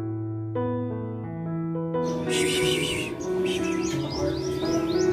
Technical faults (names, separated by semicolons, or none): none